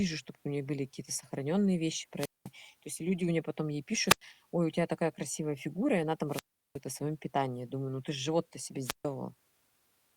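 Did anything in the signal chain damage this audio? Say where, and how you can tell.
Yes. The damage happens at the wireless link, before the receiver's output: a wireless microphone squelch dropout, repeated four times in this speech. The first comes at 2.16 to 2.51 s, after "сохранённые вещи", with a mute of about 204 ms before "есть люди у неё". The second is at 4.06 to 4.22 s, after "у неё потом ей", muting about 94 ms. The third runs from 6.28 to 6.80 s, after "и она", with a 364 ms hole before "о своём питании". The last is at 8.83 to 9.06 s, muting about 141 ms. Each has the same shape: hiss rises, the sound drops to near silence, then speech returns. The RF signal fades, the receiver's noise floor rises, and the squelch closes the output.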